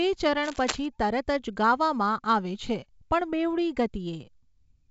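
Speech coded as G.722 wideband telephone audio, with nothing above 7.7 kHz, carries a burst of cable scratch noise from 0.43 to 0.86 s. Dense, uneven rustling sits nearly as loud as the voice, likely from a worn cable or connector being moved. Unlike isolated clicks, it is continuous and grainy.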